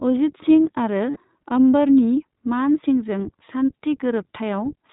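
iLBC codec, throughout: the speech passes through a narrowband VoIP codec that codes each short frame independently, so nothing above 4 kHz survives and the voice sounds plainly rough and synthetic. The coarseness fits iLBC at around 15.2 kbps with 20 ms frames.

Lost iLBC frames, from 1.10 to 1.18 s: packets went missing and the decoder filled the gap by repeating the last pitch cycle blended with noise, giving a held, faintly buzzy vowel. The length fits about 60 ms of lost audio, and the voice returns almost immediately afterwards.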